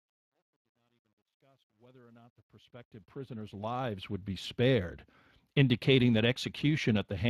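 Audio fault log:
throughout: Speex codec, plainly audible; the 22.4 kbps CELP coding leaves speech hoarse and noisy, spectrogram shows noise-like fill up top and nothing above 15.3 kHz.
0.00–4.38 s: truncation distortion on a fade, worst 0.00–2.71 s; the fade-in, keeping 11 bits without dither, turns gritty, waveform showing square steps, before "spared indicating that".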